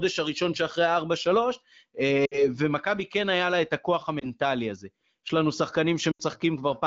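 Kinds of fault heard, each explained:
Lost AMR speech frames: Corrupted frames were discarded. The decoder covered each gap by repeating its last good pitch and vocal tract settings at falling gain. Near 2.25, 4.19 and 6.11 seconds, the speech dips for about 60, 20 and 80 ms.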